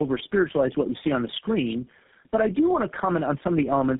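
Tandem speech coding runs throughout: the speech was decoded and re-encoded at each link, which fits three low-rate coders in series, leaving it rough, warbly and muffled, with nothing above 3.8 kHz.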